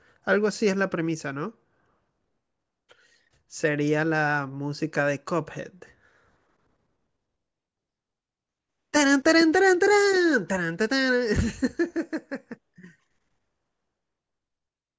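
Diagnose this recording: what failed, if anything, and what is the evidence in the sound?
Nothing stood out on listening through this speech recording, and no stage of the chain gives itself away in the sound.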